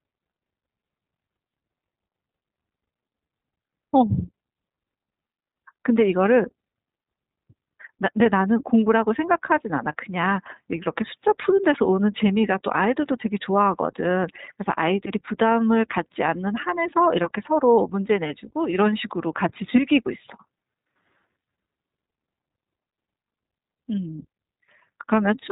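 iLBC codec, from start to finish: the speech has been squeezed through this narrowband VoIP coder, and nothing above 4 kHz survives, so sibilants and breath lose their edge. Each short block of excitation is coded on its own rather than predicted from the one before, and at what sounds like the 15.2 kbps mode with 20 ms frames the damage is plainly audible: a rough, slightly synthetic buzz running under every phrase.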